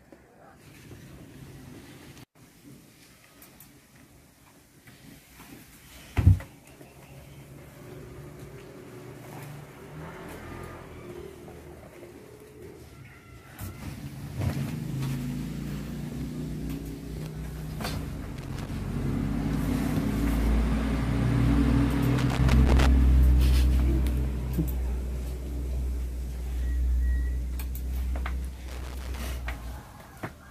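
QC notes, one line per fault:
18.36–18.69 s, 22.18–22.86 s, 28.68–29.26 s: loose connector crackle. Three irregular bursts of scratchy crackle, lasting roughly 0.3, 0.7 and 0.6 s, cut through the sound. A worn or dirty contact in the signal path is making and breaking many times per second as it shifts, so the audio is chopped on and off in rapid, uneven fragments. Any DC on the line turns each break into a pop.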